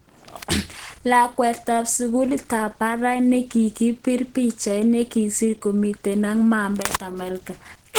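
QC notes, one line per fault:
throughout: Opus compression, plainly audible as a hoarse, grainy texture on the speech, likely from the hybrid speech mode at a rate near 16 kbps; content still extends to 20.2 kHz.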